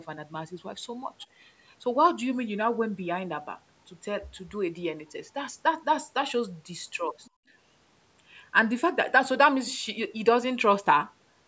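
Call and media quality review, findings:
Other side's voice leaking through, 1.21–1.25 s: brief faint second voice far below the talker, short scrap. Likely residual loudspeaker echo the echo canceller failed to subtract from the mic signal.

Other side's voice leaking through, 7.24–7.30 s: same faint far-end fragment, very low level. Echo path likely not fully modelled, so remote audio survives cancellation.

Other side's voice leaking through, 9.68–9.78 s: longest and clearest leak, roughly 100 ms, noticeably louder than the earlier two but still well under the talker. Likely canceller residual rising.

Speech suppressed in double talk, 7.35–7.40 s: talker's level collapses deeply for about 50 ms, right after the 7.24 s leak. Likely double-talk overlap; canceller cannot separate near and far speech, attenuates both.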